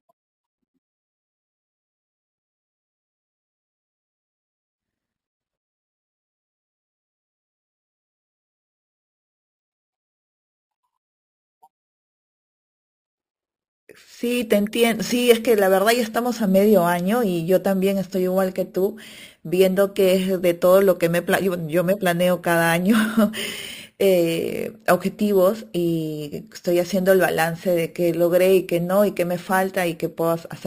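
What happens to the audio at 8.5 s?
At 8.5 s, as throughout, imaging from sample-and-hold upsampling from 12 kHz is present. Unsmoothed repeated samples mirror the speech into 6–12 kHz at about 20 dB down, a metallic fizz that, unlike steady hiss, tracks loudness and moves opposite to pitch.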